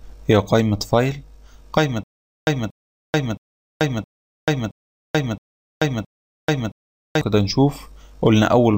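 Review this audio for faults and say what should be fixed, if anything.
Stutter with silent gaps from 2.04 to 7.21 s. A 233 ms burst repeats seven times, each followed by about 436 ms of digital silence. This is likely a stalled stream replaying its last fragment. Buffer enough audio ahead of playback so stalls never empty the output.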